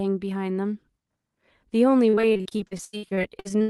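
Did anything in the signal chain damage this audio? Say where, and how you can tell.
Yes. The damage happens at the network stage, in the final stretch of the speech, from 2.09 s to the end at 3.7 s. There, repeated packet loss gives a choppy, robotic sound. About twenty short holes follow one another, the longest about 80 ms. Each hole is papered over by stretching the previous sound, so roughly two fifths of that stretch is synthetic fill. A further 500 ms goes missing. The Opus coding around it, band-limited near 12 kHz, is not the cause.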